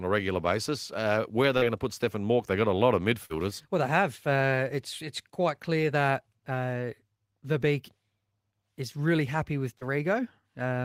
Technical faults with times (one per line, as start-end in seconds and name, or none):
1.57-1.63 short concealed packet loss
3.25-3.32 short concealed packet loss
9.78-9.83 short concealed packet loss